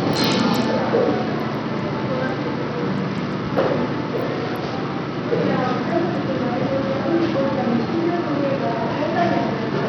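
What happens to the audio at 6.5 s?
At 6.5 s, as throughout the clip, the treble flickers and thins, nothing reaches past 17.3 kHz, and gritty noise rides along. That is likely heavy Bluetooth SBC compression at a bitrate around 64 kbps, which starves and coarsely quantises the upper sub-bands.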